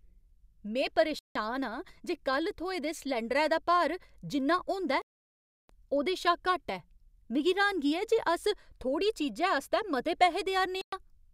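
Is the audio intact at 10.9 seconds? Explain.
No. A Bluetooth stall cuts the speech to silence from 10.81 to 10.93 s, a gap of about 111 ms. Interference likely delayed packets, so the headphone buffer emptied. Playback paused until resent data arrived, then resumed.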